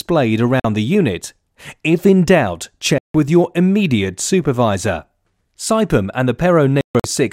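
Packets likely failed to reach the headphones in time, causing a Bluetooth dropout. The sound cuts abruptly to silence from 0.60 to 0.65 s and from 2.98 to 3.15 s, then stutters through broken gaps from 6.81 to 7.04 s, resuming further along each time.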